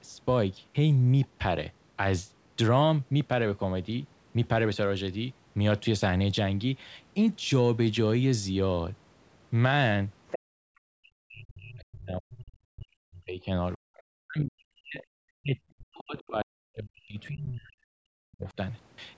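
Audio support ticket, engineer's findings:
Other side's voice leaking through. A second voice under the talker at 10.28 to 10.39 s, about 10 dB below the speech. Fainter scraps at 13.97 to 14.02 s (about 35 dB down) and 16.2 to 16.28 s (about 30 dB down). Likely residual loudspeaker echo that the echo canceller left in the microphone signal.

Background gated by the echo canceller. Room tone drops out abruptly from 10.39 to 10.7 s, falling by up to about 35 dB for roughly a third of a second, then returns. The canceller's suppressor clamped the microphone hard right after the leaked far-end burst and released once it judged the echo gone. It is a gain gate, not a level change at the source.

Speech suppressed in double talk. The talker's speech is turned down across two long stretches, 10.98 to 15.02 s and 15.4 to 18.57 s, with drops approaching 40 dB over roughly 4 s and 3 s. Likely the echo canceller failing to separate near-end speech from loudspeaker echo while both sides talked, and attenuating both.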